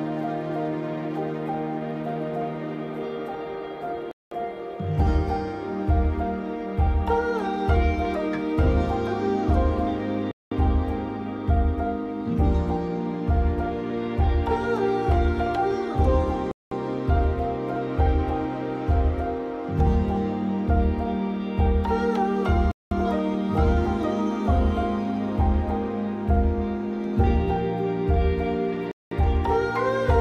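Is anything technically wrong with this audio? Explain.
Yes. There is a gap between chunks at 4.11, 10.31, 16.51, 22.71 and 28.91 s. Each is a 0.2 s silence between 6 s stretches of sound. The sound breaks off abruptly and resumes intact. On a waveform and spectrogram, each gap shows as a flat, empty column with sharp vertical edges, recurring every 6.2 s.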